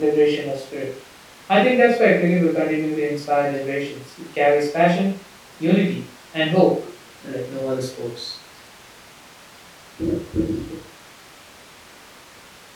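The speech recording shows no technical faults anywhere.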